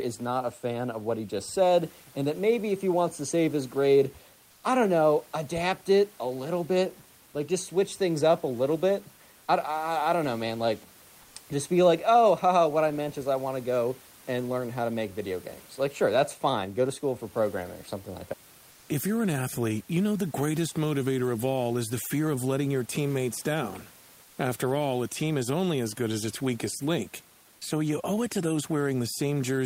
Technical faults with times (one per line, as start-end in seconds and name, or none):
24.23-24.37 comfort noise in place of the background